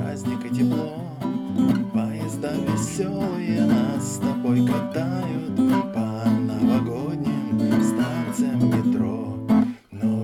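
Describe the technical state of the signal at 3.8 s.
At 3.8 s the signal is intact, with no dropout, clipping, glitch or other fault to be heard at that moment.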